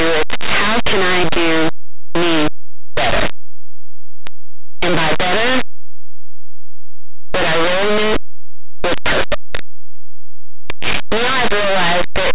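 Throughout the speech, linear 8-bit audio read as companded mu-law flings near-zero samples on one side of zero to the largest outputs. The result is very loud, harsh distortion and a broadband spectrogram smear.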